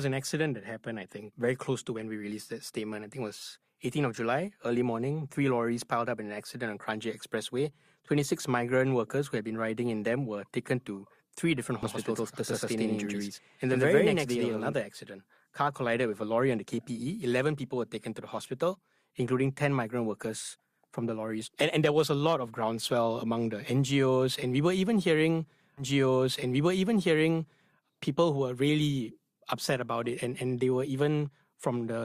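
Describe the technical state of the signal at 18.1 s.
At 18.1 s the speech signal is intact, with no dropout, distortion, glitch or other audible fault at that moment.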